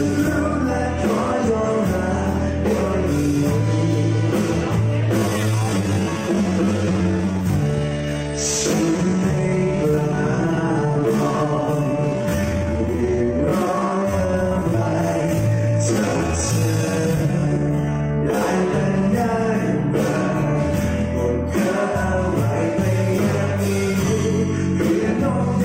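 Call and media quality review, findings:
Time-stretched section, 5.13 to 18.41 s: pace abruptly slows to 0.68x while pitch holds steady. Likely a software time-stretch lengthening audio by repeating short pieces to preserve pitch.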